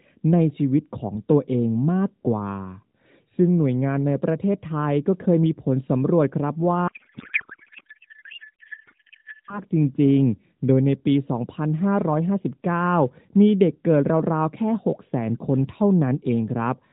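A speech clip carried over AMR narrowband, with nothing above 4 kHz and lightly synthetic coding. From 6.88 to 9.61 s a codec payload misread replaces the speech with garbled warble and noise that barely tracks it, consistent with octet-aligned AMR frames being parsed as bandwidth-efficient, so every field lands in the wrong bit position.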